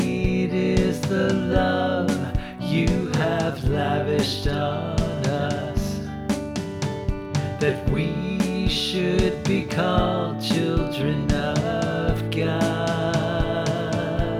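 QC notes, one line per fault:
No faults to note.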